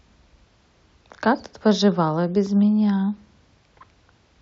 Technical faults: none

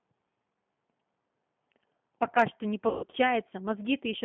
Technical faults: G.729 codec; VoIP packet loss concealed by the speech codec

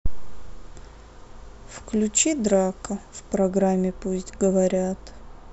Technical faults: de-emphasis applied wrongly

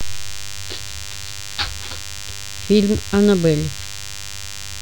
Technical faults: DECT cordless phone buzz

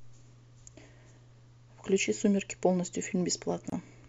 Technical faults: gap at a join of encoded pieces

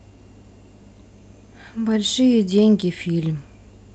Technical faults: none

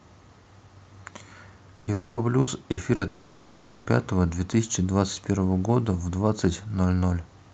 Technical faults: burst of packet loss; long network dropout

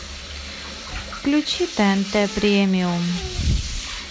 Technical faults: none

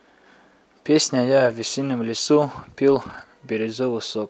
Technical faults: lost packet rebuilt from error correction

